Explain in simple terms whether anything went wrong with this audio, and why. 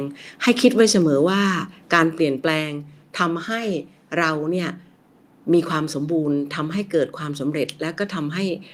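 Two things go wrong in this speech clip.

At 1.02 s the whole recording, both the voice and the background, suddenly becomes a little quieter in a single step. That is a microphone volume stepped down fault. The likely cause is the call software deciding the microphone was set too loud and lowering its input volume all at once. The drop is small.

From 1.93 to 1.99 s a loud moment comes out harsh and crackly. This is microphone overload. The sound briefly got louder than the system could record, so the tops of the loudest peaks were cut flat, which produces that rough, distorted edge. Only a small fraction of the sound is affected, and the most likely cause is the microphone's input level still being set too high.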